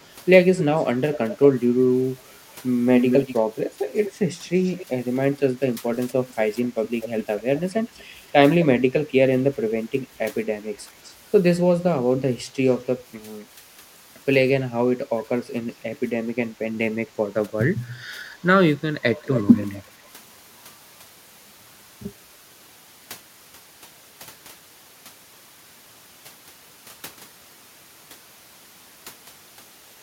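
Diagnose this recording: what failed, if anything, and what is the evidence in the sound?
In call processing, the far-end echo canceller likely left loudspeaker pickup in the signal. This echo leak returns the speech 228 to 270 ms late, roughly 5 to 30 dB down, at 0.01–1.35, 2.99–3.35, 4.05–5.36, 5.94–8.26, 11.04–11.13 and 19.16–19.65 s.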